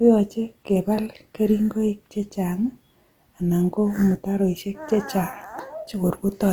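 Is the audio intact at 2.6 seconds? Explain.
No. At 2.6 seconds the speech carries plainly audible Opus compression damage, present throughout the clip. The likely cause is Opus in its music (CELT) mode at a low rate, which fits about 24 kbps. The encoder keeps each band's energy but, short of bits, fills bands with folded copies of lower bands or with noise. So tones sound grainy and rough, not swirly. The bandwidth stays full, extending to about 20.1 kHz.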